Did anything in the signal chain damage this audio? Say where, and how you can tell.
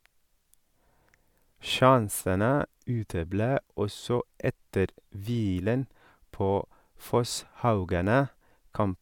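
No, nothing in the chain, from capture through to playback, has left any audible damage on this speech recording.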